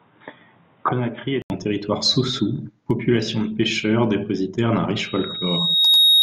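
An input switched to a poorer device is the likely cause of the sound from 0.0 to 1.5 s. The speech is dull and boxy with nothing above 3.8 kHz, sits around 5 dB quieter over a faint new noise floor, and an 80 ms silence marks the switch.

A loudspeaker feedback squeal runs from 4.95 s to the end at 6.23 s. The microphone picks up its own loudspeaker, and a single 3.8 kHz tone swells over about a second into a squeal roughly 10 dB louder than the speech.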